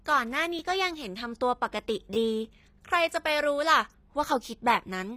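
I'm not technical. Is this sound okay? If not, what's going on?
No. The speech has a gritty, metallic treble throughout, likely from HE-AAC compression, which rebuilds high sounds from lower ones rather than simply dulling them.

There is also a repeated buffer at 0.59 s and from 2.14 to 2.16 s: a tiny slice replays once, then twice, heard as a click or brief buzz rather than a gap.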